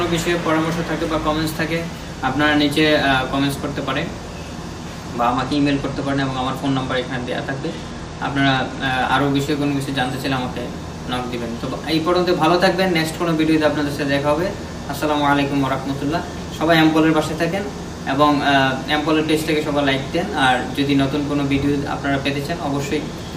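From 5.31 to 9.17 s a Bluetooth SBC bit pool drop dulls the treble and adds gritty noise, consistent with the phone cutting from bit pool 28 to about 13, near 102 kbps. A spectrogram shows the upper bands thinning or vanishing, with speckled noise below.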